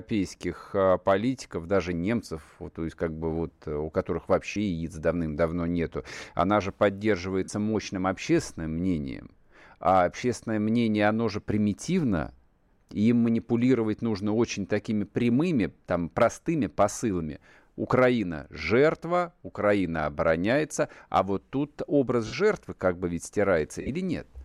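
Lost LE Audio frames interrupt the speech at 4.54 s, just after "вот э у которых", lasting 15 ms. They return at 7.44–7.49 s (45 ms, just before "мощным общественным мнением"), 16.93–16.97 s (30 ms), 22.27–22.33 s (52.5 ms), and 23.81–23.89 s just after "как бы ведь", where gaps scatter over 75 ms, the longest around 50 ms. These lengths fit runs of 7.5 ms frames. In each gap the LC3 decoder repeats the last spectrum with random signs, so the voiced tone becomes a brief noisy smear, and the longer gaps fade as the concealment decays. On a spectrogram the harmonic striations blur into a noise-like column with the same overall envelope. In the waveform the periodic cycles become an irregular patch that shrinks in the longer gaps. The light lossy compression underneath stays unobtrusive.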